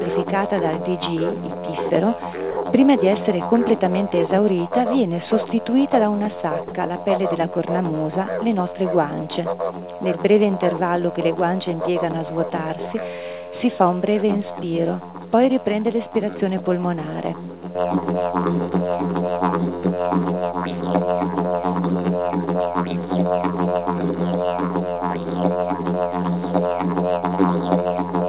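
Two brief holes show up in the audio, at 2.51 to 2.57 s (60 ms) and again at 6.68 to 6.71 s (30 ms), where the sound gives way to a thin, steady hiss before picking back up. That's most likely sound dropped by the voice detector: the sender judged those moments to be background and stopped transmitting, so the far end filled the gap with comfort noise. The whole thing comes through a call path with nothing above 4 kHz, which fits G.711 mu-law at 64 kbps.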